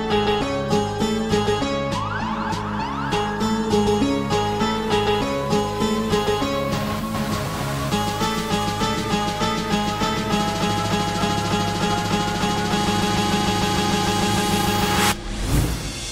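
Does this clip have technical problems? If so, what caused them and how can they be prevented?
Yes. A buzz at 25 Hz runs through the whole clip, caused by a filter restarted on every block. The filter loses its state at each block boundary and restarts from silence. That produces a tick every 40 ms, which tracks the sound's level. Keep filter state across blocks to prevent it.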